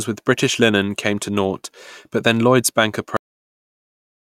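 A speech recording with a cut-off end: at 3.17 s the sound stops mid-sound because the final buffers were never written, leaving digital silence to the end. On a waveform the trace drops abruptly to a flat line, and a spectrogram shows energy ending in a vertical edge with no decay tail.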